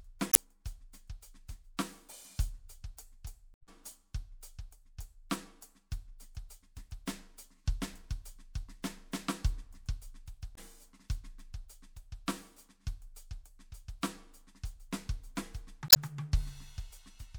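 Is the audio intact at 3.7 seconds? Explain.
No. A brief garbled burst breaks into the music from 3.54 to 3.69 s, ending right at that point. This is damaged data in a compressed stream: corrupted bytes made the decoder misread those frames and lose sync until it found the next valid frame header.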